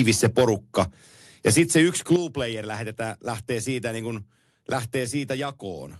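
Between 2.11 and 2.14 s, just before "player lähtee siitä niin", a loud peak turns briefly harsh and crackly, its tops sounding flattened rather than rounded. This is most likely microphone overload: the input level was set high enough that the peak pushed about 1 dB past the converter's ceiling, so roughly one sample in twenty in that stretch was cut off flat. That squaring-off of the waveform adds the gritty edge heard on the burst.

At 2.16 s, right after that distorted peak and still ahead of "player lähtee siitä niin", the speech and the background fall together in one abrupt step, about 8 dB quieter, with no fade. That points to a microphone volume stepped down, likely by the call software reacting to the clipping it had just detected and lowering the device's input gain in a single move. The speech is heard through the Opus call path with its roughly 12 kHz top end.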